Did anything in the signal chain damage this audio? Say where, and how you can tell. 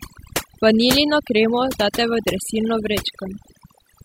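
Yes. The damage comes from overdone noise removal in the processing stage, and it runs through the whole speech clip. Between phrases the background drops to near silence. Small twinkling specks of sound flicker in that silence. The noise reduction was set too hard. It pushes individual frequency bands down whenever they sit close to its noise estimate. Quieter parts of the voice fall into that range and get cut away with the noise.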